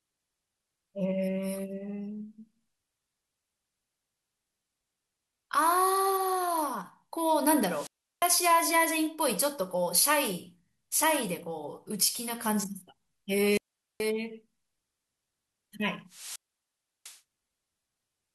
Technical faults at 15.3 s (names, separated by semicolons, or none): none